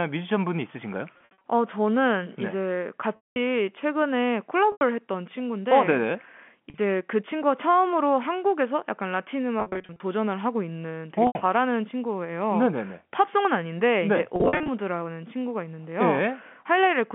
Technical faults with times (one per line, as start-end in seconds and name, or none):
1.14-1.43 packet loss with pitch repetition
3.16-3.36 packet loss with pitch repetition
4.72-4.81 packet loss with pitch repetition
6.70-6.78 packet loss with pitch repetition
9.60-10.00 packet loss with pitch repetition
11.27-11.35 packet loss with pitch repetition
14.36-14.68 packet loss with pitch repetition